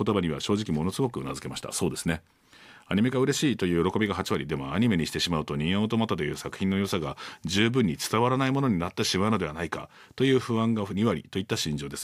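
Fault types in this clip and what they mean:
No faults detected in this speech recording; nothing to report.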